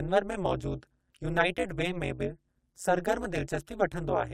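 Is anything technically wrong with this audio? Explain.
Yes. Overlap-add ripple runs through the whole speech clip. The frames were rejoined with windows that don't overlap to a constant gain, so the level dips by about 60 dB around 200 times a second. This makes a harsh, metallic buzz. The waveform envelope shows a regular comb of deep notches, and a spectrogram shows evenly spaced vertical stripes.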